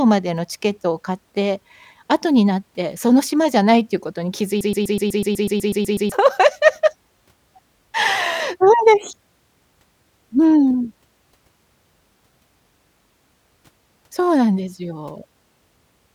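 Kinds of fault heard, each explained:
Broken-record loop: From 4.61 to 6.12 s the speech locks onto a 124 ms fragment. It repeats exactly, back to back, twelve times. The playback chain likely stalled and kept resending its last buffer. The speech due in that stretch is lost.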